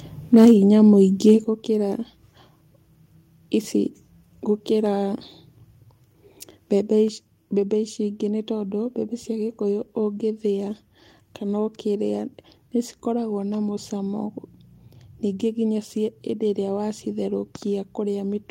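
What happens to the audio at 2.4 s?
Nothing goes wrong at 2.4 s; the speech there plays through intact, with no dropout, click, distortion or other fault.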